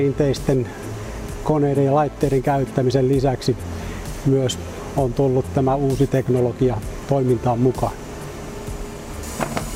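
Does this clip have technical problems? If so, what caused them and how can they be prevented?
No, the signal comes through intact and steady, with no audible technical faults anywhere in the clip, so there is nothing that needs preventing.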